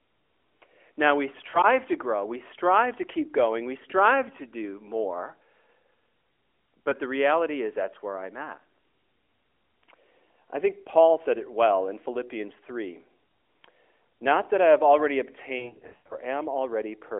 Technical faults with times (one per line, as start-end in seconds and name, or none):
1.50-1.61 lost AMR speech frames
6.90-6.94 lost AMR speech frames
15.58-16.15 lost AMR speech frames